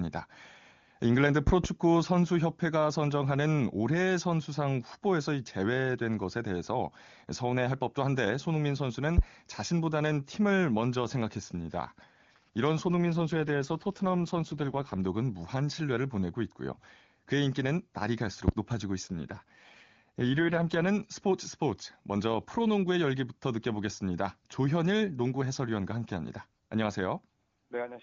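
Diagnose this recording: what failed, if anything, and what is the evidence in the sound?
Loud pops sit in the analogue wiring or power path: two in quick succession at 1.47 to 1.67 s, then single ones at 9.18 s and 18.48 s, each about 20 dB above the speech, which continues underneath. Likely cause: voltage steps from a switch, connector or static discharge.

AMR rate drop in the network/codec stage at 12.86 to 14.98 s and 19.05 to 20.87 s: the speech turns rough and synthetic with no gap and no change of bandwidth, fitting a fall from the AMR-WB codec's clean 23.85 kbit/s to 8.85 kbit/s, with bits diverted to error protection.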